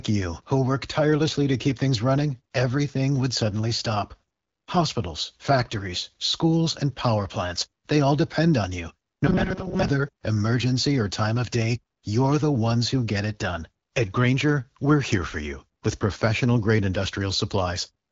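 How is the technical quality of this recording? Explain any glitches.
One glitch stands out in this speech recording, which comes through an AMR wideband (HD Voice) codec path with light coding damage and nothing above 7.5 kHz.

Robotic sound from repeated short buffers occurs from 9.27 to 9.88 s, between "all depend on you" and "emergency or time of". Audio likely arrived too seldom, so a roughly 5 ms fragment was looped over about half the passage. This imposes a rigid, metallic 188 Hz buzz.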